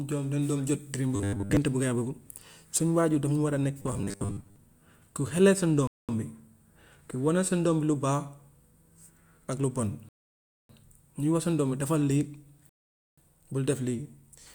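Twice early on, new audio seems to have arrived too seldom, and playback likely kept repeating a short 10 ms slice in its place. That produces robotic sound from repeated short buffers: a rigid, metallic 100 Hz buzz that loosely follows the speech. It runs from 1.16 to 1.57 s, with most of the audio replaced, and again from 3.82 to 4.56 s, with about half replaced.

Later the player ran out of downloaded audio three times, a rebuffering stall each time. Speech drops to silence and then resumes exactly where it stopped, with nothing lost, adding 214 ms at 5.87 s, 605 ms at 10.09 s and 482 ms at 12.69 s.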